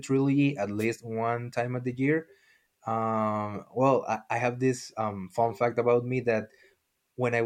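Around 0.79 to 0.85 s, just before "one time of the", there's a wireless microphone noise hit: the FM radio link briefly fades as reflections cancel, receiver noise swells up, and you get a quick swish of static over the speech for roughly 70 ms.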